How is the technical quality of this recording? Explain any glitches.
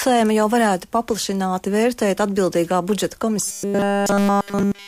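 The recording degrades near the end with one glitch. From 3.45 s to the end, there is robotic sound from repeated short buffers: new audio likely stopped arriving in time, so playback looped a roughly 5 ms chunk continuously. That forces a rigid, metallic 200 Hz buzz over the sound, which only loosely follows the original.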